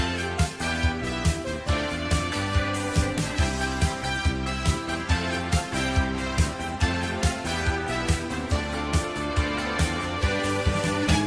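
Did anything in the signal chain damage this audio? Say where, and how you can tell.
No, nothing in the signal chain damaged this audio.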